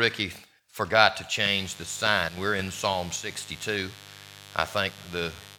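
From 1.41 s to the end, a mains buzz sits under the sound: a steady, raspy drone built on 50 Hz, at about 20 dB below the signal. Switching spikes twice per cycle leak in, so a spectrogram shows evenly spaced horizontal harmonic lines stacked into the kilohertz range, and the waveform carries a regular 100 Hz spiky ripple.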